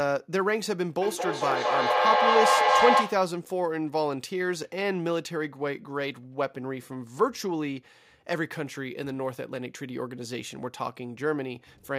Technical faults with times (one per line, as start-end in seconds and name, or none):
1.01-3.42 feedback echo between two devices